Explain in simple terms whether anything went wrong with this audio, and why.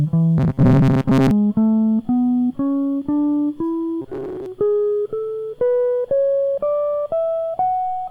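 Twice the music turns into a stiff, metallic buzz, from 0.38 to 1.31 s and again from 4.02 to 4.46 s, holding a fixed drone near 133 Hz. This is robotic sound from repeated short buffers. The likely cause is that new audio arrived too slowly, so playback kept repeating the last sliver of sound, about 7.5 ms long. Most of the first stretch and about half of the second was filled this way.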